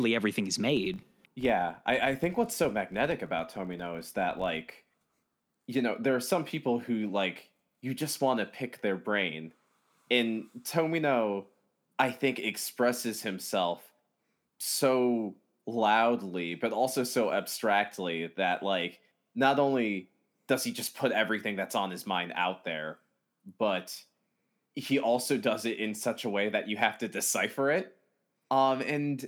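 Filter restarted on every block, from 0.77 to 5.47 s of this speech clip, between "everything he's" and "you know there are": the filter starts each block from silence, so a tick at every block boundary forms a buzz near 46.9 Hz that rises and falls with the level, which fits a 1024-sample block.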